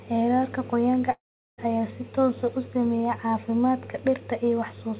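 From 1.12 s to 1.6 s the speech turns into a fading, buzzy continuation of the last sound, then about 370 ms of silence, and resumes with 460 ms of audio gone. This is likely a long network dropout, which the receiver papered over until it gave up.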